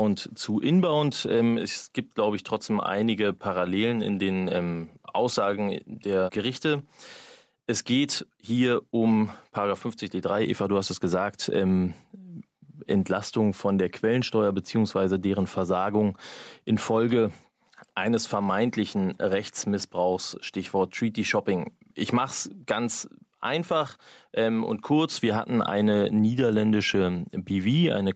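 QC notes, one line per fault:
throughout, gain pumping: the gain swings by about 5 dB, squashing loud and soft passages together; likely an input gain set far too high, with a fast limiter clamping every peak.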